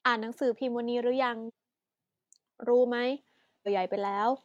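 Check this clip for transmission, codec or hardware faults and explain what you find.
There's damaged data in the compressed stream, twice: once at 1.44 to 1.51 s and again at 3.63 to 3.68 s. In both spots, bad bytes in the encoded frames throw the decoder off, so it loses sync and hunts for the next frame header. You hear that as a short glitch in the speech.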